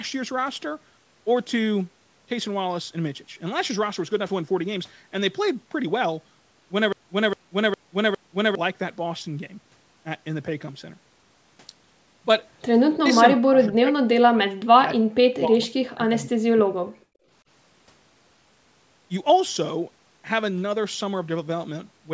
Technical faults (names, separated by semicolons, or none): stutter with silent gaps; speech suppressed in double talk; echo leak